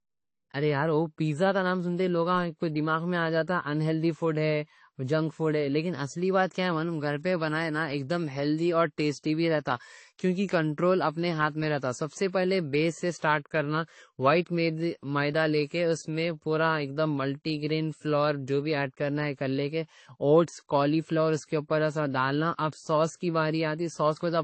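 Throughout, the speech has nothing above 8.3 kHz and a smeared, swirly edge. This likely comes from transcoding between lossy codecs, sounding like low-bitrate MP3 re-encoded to AAC.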